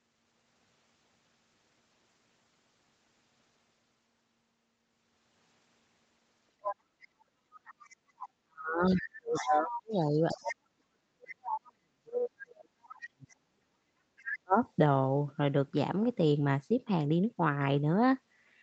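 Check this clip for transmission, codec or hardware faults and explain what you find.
Two echo-control faults are present in this speech, both concentrated between about 6.6 and 14.6 s.

Other side's voice leaking through at 6.62–7.24, 7.65–8.29, 8.89–9.98, 10.29–10.55, 11.29–11.61 and 12.86–13.36 s: a second voice sits below the talker, loudest near 9 s. The likely cause is residual loudspeaker echo the canceller missed.

Speech suppressed in double talk at 8.43–13.77 and 14.26–14.6 s: the talker dips by up to about 40 dB. This is likely the canceller attenuating both voices while the far end speaks.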